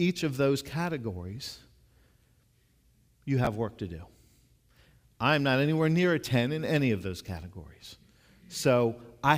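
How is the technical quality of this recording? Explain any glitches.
There's one real glitch in the speech, a case of chunks out of order at about 3.45 to 3.47 s. A roughly 11 ms chunk landed one slot late, so two pieces swap places with hard joins at each seam. You hear a brief jumbled stutter.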